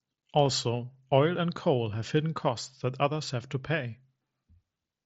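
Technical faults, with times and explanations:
No faults detected; the speech runs over a Bluetooth mSBC headset link, which stops the band at about 7.6 kHz.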